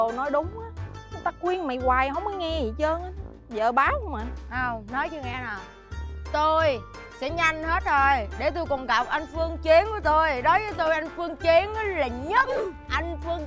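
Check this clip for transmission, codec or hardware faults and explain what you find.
No transmission, codec or hardware fault is audible anywhere in the clip.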